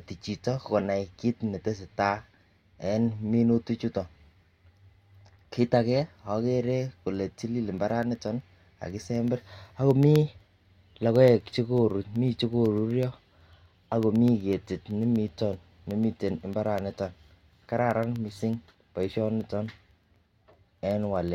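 Speech with a steady ticking every 0.125 s from 7.78 s to 21.28 s: periodic USB or driver dropouts, each blanking a tiny fraction of a millisecond to silence.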